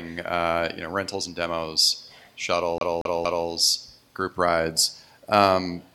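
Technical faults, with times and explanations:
2.78–3.48 s, CD stuck on one turn: a 0.23 s slice of sound repeats three times, each jump marked by a brief mute, as the laser slips back one track.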